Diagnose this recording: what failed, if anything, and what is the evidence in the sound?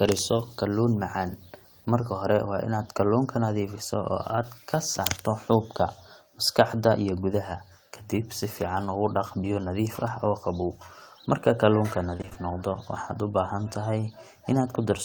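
A buzz at 59.94 Hz with hash and a faint 15.7 kHz line tone, about 30 dB down, fills 0.0 to 2.0 s before "hore waa inaad kalluunka". This is video or display buzz coupling into the analogue wiring.

From 12.17 to 12.37 s, just before "noqdo waxaad", the audio turns choppy, with about half the span patched. This is repeated packet loss (robotic sound) on the network, with gaps of up to 20 ms, which fits 20 ms packets.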